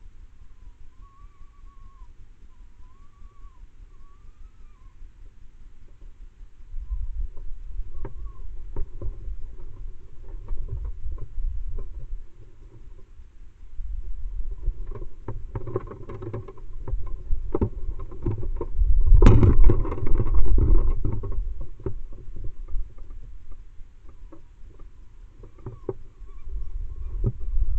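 No audible faults detected.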